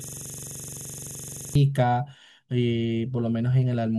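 System hang loop, already under way when the clip opens and lasting until 1.55 s: the machine stalled while the sound hardware kept replaying one 42.67 ms slice of its ring buffer, which fits a 2048-sample buffer. That slice repeats about 35 times at 23.4 Hz, producing a rapid, rattling stutter.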